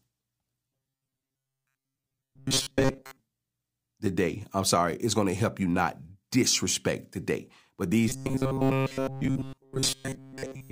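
From 0.67 to 3.20 s, and again from 8.09 s to the end, the speech turns into a rigid, metallic buzz locked at 134 Hz that only loosely tracks the syllables. This is robotic sound from repeated short buffers. New audio likely arrived too seldom, so the playback looped a fragment of about 7.5 ms in place of the missing signal. Most of each stretch is those repeats, and their fixed repetition rate sets the buzz pitch.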